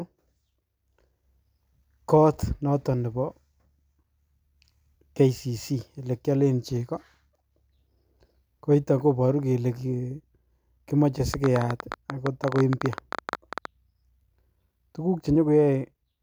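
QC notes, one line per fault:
11.34–13.66 s, train of clicks: a burst of sharp ticking and popping sits on top of the speech for just over two seconds, around thirty clicks of much the same shape arriving at about 13 per second but at an uneven pace, each peaking roughly 10 dB above the speech so they stand out clearly. The likely cause is interference from nearby equipment or a faulty connection or power supply injecting a repeated pulse into the signal path.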